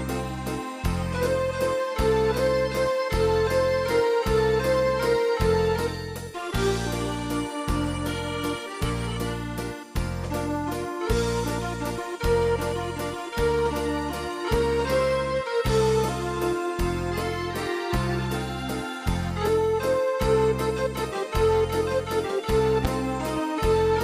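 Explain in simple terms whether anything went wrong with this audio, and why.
Near the end, from 22.85 to 22.87 seconds, there is a single loud pop: a sharp, brief thump that jumps well above the level of the surrounding sound, while the audio keeps playing underneath. A pop like this is likely caused by a sudden electrical jolt, such as a plug being moved, a switch being flipped, a static discharge or a hiccup in the audio hardware, which briefly kicks the signal before the equipment settles again.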